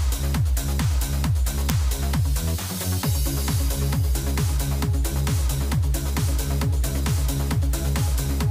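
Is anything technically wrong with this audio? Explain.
Yes. At 1.70 s an uninitialised buffer was played: a block went out before any audio had been written into it, so whatever data was left in memory was sent out as samples. It lasts about 0.73 ms, which fits a 32-sample buffer, and is heard as a brief crack.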